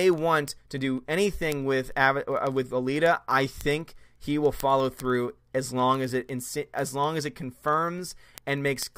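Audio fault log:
0.13–8.97 s, word clock ticks: sharp, uneven ticks recur at a steady rate of roughly one every 50 ms, some 200 in all, across the speech. The receiving device is running on its own clock rather than locked to the digital source, and the mismatch, on the order of 500 ppm, makes a single sample slip each time the clocks drift past each other. The strict regular spacing and tiny one-sample size set this apart from buffer dropouts, which leave audible gaps at irregular moments.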